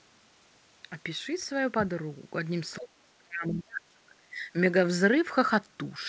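From 2.77 to 4.54 s the speech sinks. For about a second and a half within that span it drops in level, at worst by around 30 dB, so parts nearly vanish. This is speech suppressed in double talk, likely caused by an echo canceller that could not tell the talker from the far side's echo while both spoke, so it turned everything down. Throughout, nothing is heard above 8 kHz, which fits a wideband call codec such as G.722.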